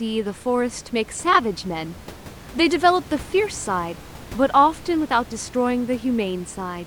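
Nothing in this speech recording stood out as a technical fault on listening, with only the room's background noise sitting about 19 dB below the speech.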